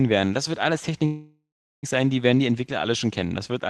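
From 1.05 to 1.85 s, after "werden das wird alles", a call audio freeze: the last sound continues as a fading buzz, then about 0.37 s of silence, likely a jitter buffer running empty while packets were delayed. Speech resumes with "sein die werden die", nothing lost, just delayed about 0.78 s. On a spectrogram, smeared flat bands fade into a blank gap.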